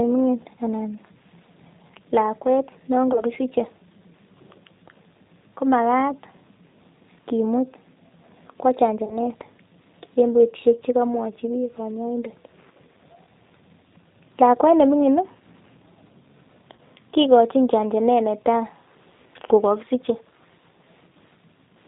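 G.729 coding runs through the whole speech clip, with plainly audible damage that fits an 8 kbit/s codec. Each 10 ms frame is rebuilt from a vocal tract filter, a pitch predictor and a few pulses, so the voice sounds slightly rough and synthetic, with nothing above 4 kHz.

VoIP packet loss concealed by the speech codec occurs three times, at 3.13 to 3.23 s, 9.05 to 9.19 s and 16.76 to 16.79 s. Each gap is about 20 ms of missing audio, consistent with a single lost packet. The decoder stretches its last pitch and filter into a brief buzzy tone or coloured noise that fades, and the voice stays weak or distorted for a moment after the stream resumes.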